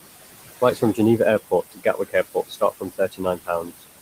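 Across the whole clip the background pumps: it drops away between phrases and swells back under the speech. These are noise suppressor artifacts. The room noise sits about 12 dB below the speech, and the suppressor pulls the bands it judges to be steady noise down by about 18 dB, frame by frame.

From 0.61 to 0.99 s, parts of the speech turn faint and swallowed, with about a tenth of a second affected in total and dips of up to about 12 dB. From 1.72 to 2.15 s the same happens more heavily, with roughly a fifth of a second pulled down by up to about 19 dB. From 2.34 to 3.82 s it is heaviest: around half a second in all sinks by as much as about 20 dB. In each stretch the speech is cut by the noise suppressor, which mistook quiet speech energy for noise and attenuated it along with the background.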